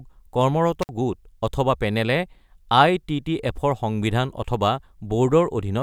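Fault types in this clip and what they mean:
Intermittent contact: a loose connection briefly opens, cutting the speech for about 57 ms near 0.82 s; crackle at each edge and faint hiss distinguish it from a clean digital dropout.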